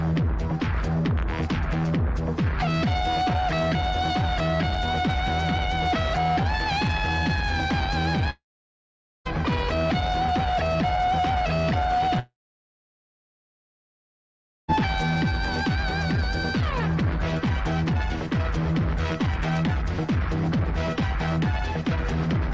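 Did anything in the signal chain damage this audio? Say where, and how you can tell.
Yes, the damage likely happened on the network stage, as a long network dropout. The sound stops twice, from 8.30 to 9.27 s and from 12.19 to 14.70 s. Each gap starts with a short buzzy continuation of the last sound that fades out. Silence follows, about 0.84 s in the first gap and 2.36 s in the second. The audio then resumes with the missing stretch gone. The receiver stretched the last audio it had, then gave up. The call codec's 8 kHz top limit stays the same on both sides of each gap.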